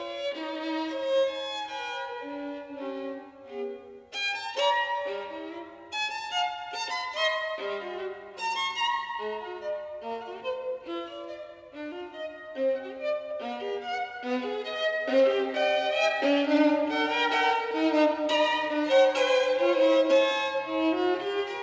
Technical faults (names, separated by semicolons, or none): none